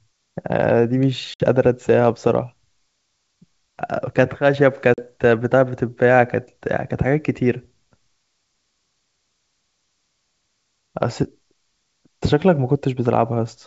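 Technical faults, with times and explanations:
1.34 to 1.41 s and 4.94 to 5.04 s, packet loss on an ADPCM call: hard silent gaps of 60 and 40 ms. The desynchronised decoder then resumes with brief distortion.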